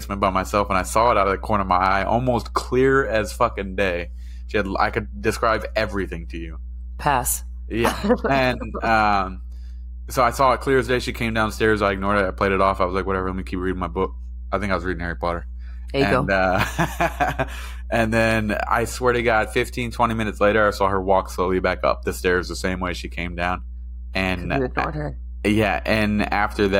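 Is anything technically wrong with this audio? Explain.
Yes. A mains hum runs through the entire speech clip, a steady low tone at 60 Hz sitting roughly 10 dB below the speech, loud enough to hear under every phrase and in every pause. A ground loop or a nearby transformer leaks the power line's alternating current into the signal path. Unlike broadband rumble or handling noise, it holds one fixed pitch with low harmonics and never changes with the speech.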